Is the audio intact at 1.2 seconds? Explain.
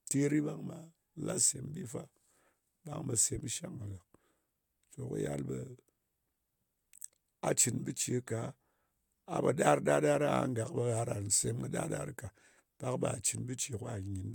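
Yes, the audio is intact at 1.2 seconds, with no dropout, click, distortion or other fault at that moment.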